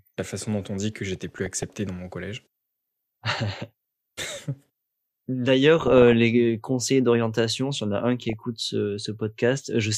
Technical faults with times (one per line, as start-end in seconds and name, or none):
1.12-1.78 DAB burbling
3.57-4.46 DAB burbling
5.79-6.13 DAB burbling
8.25-8.44 DAB burbling